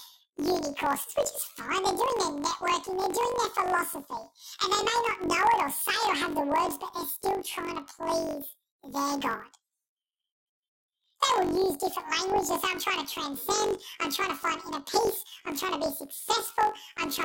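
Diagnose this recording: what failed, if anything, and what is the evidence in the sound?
Sample-format conversion failed: this speech shows planar audio read as interleaved throughout. Each block holds all left samples and then all right, which fits a 1024-sample buffer. Reading them as alternating pairs plays each 21.33 ms block twice at double speed, raising pitch by 12 semitones, an octave, with a flutter at 46.9 Hz. Unlike a simple sample-rate mismatch, the pace and overall duration stay normal despite the octave shift.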